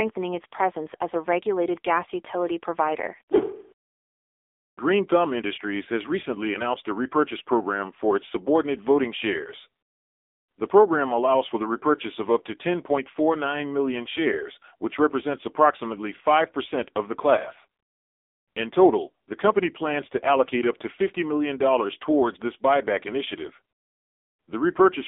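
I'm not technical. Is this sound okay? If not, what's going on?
No. From start to finish the speech has passed through the AMR narrowband mobile codec, the phone-call speech compressor. Everything above about 3.7 kHz is gone, leaving it thin and muffled, and the heavy compression makes the voice sound buzzy and artificial throughout.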